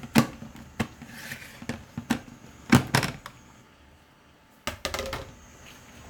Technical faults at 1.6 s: none

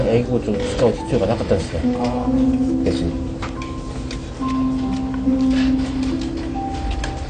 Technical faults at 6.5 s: AAC compression

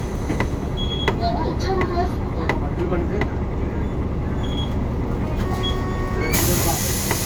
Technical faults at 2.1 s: low-bitrate audio saved at a high bitrate

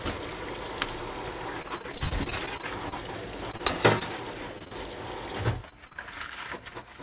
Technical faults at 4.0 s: repeated packet loss (robotic sound)

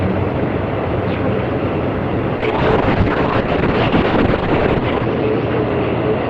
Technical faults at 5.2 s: call bitrate drop

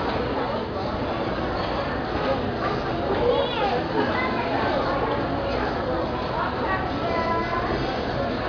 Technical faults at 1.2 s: none

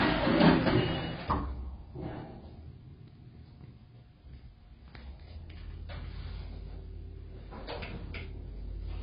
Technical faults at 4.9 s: AAC compression

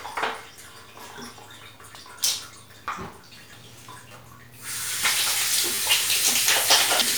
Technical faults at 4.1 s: repeated buffer

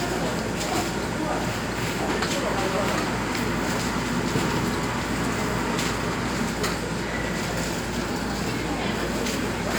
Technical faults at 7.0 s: none

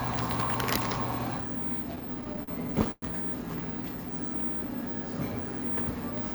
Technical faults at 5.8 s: none

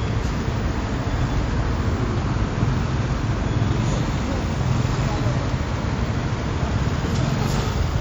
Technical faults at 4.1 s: WMA compression

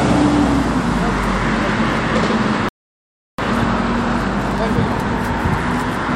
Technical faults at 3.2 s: playback stall

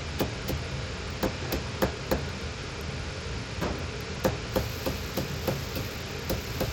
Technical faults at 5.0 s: Bluetooth SBC compression

